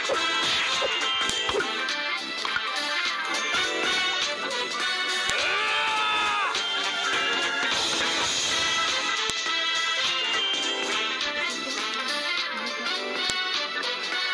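At 1.30, 5.30, 9.30 and 13.30 s there's a sharp, loud snap, regular as clockwork every 4 seconds. That's a file header played as audio: the sound was joined or streamed in 4-second pieces, and each piece's header bytes got left in and played out as samples. A few dozen bytes of non-audio data land as a near-instant spike, so it cracks through no matter what the sound underneath is doing.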